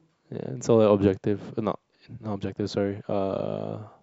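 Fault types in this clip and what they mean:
No faults can be heard.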